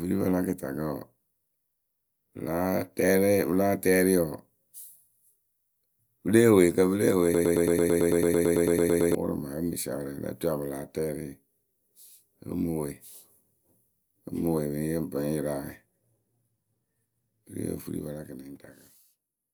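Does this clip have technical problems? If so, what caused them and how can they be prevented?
Yes. From 7.34 s to 9.15 s a broken-record loop takes over: a likely playback or stream stall kept resending its last 111 ms fragment, so that sliver of speech repeats 16 times back to back and the audio due then is lost. Preventing it takes stall detection that mutes or resyncs instead of replaying stale buffers.

From 17.77 s to 19.08 s, zipper noise rides on the speech as the level drops by roughly 15 dB. The gain moved in unsmoothed 2 dB steps, about seven a second, each leaving a small click. Ramping gain per sample instead of per block prevents it.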